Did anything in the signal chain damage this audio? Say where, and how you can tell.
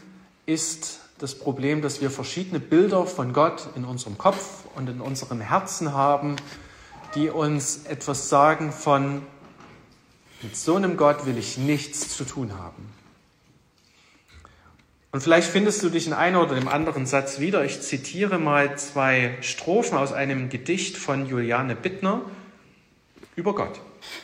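No, nothing in the signal chain audibly damaged this audio. No stage shows any sign of a fault.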